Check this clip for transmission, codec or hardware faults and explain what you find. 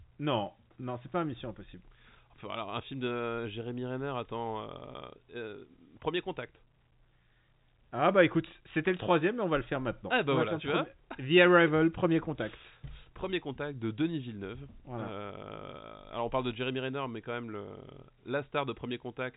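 Nothing in the transmission, coding or hardware chain stands out as a fault: the speech carries the band-limited character of G.711 telephone coding, with content stopping at about 3.8 kHz and any quantisation noise faint at most, which fits an ordinary A-law telephone channel at 64 kbps.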